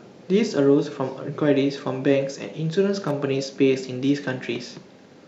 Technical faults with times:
3.08-3.11 electrical switching spike

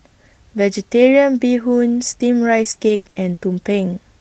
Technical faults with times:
2.63-3.39 repeated packet loss (robotic sound)
3.89-3.91 lost packet rebuilt from error correction

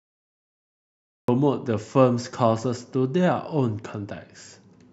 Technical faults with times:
0.00-1.28 cut-off start

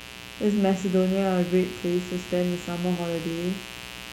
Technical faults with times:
0.00-4.12 mains buzz

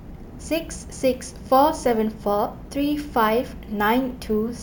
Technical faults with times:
0.00-4.63 imaging from sample-and-hold upsampling

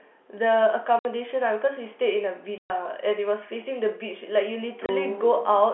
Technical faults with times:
0.99-1.05 packet loss filled with silence
2.58-2.70 packet loss filled with silence
4.86-4.89 packet loss filled with silence

